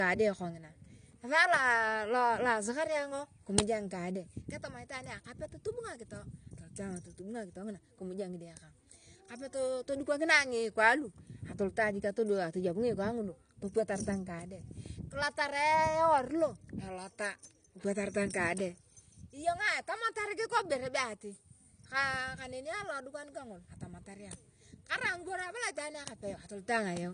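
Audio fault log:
Throughout: AAC compression. The speech has nothing above 9.8 kHz, leaving it dull, and the codec damage is plainly audible as smearing with a warbling, fizzy texture on sibilants and held sounds. This is likely AAC-LC at a low bitrate, with the damage fitting roughly 32 kbps: short of bits, the encoder drops the top of the spectrum and quantises the remaining frequency lines so coarsely that parts of bands fall out or turn to noise.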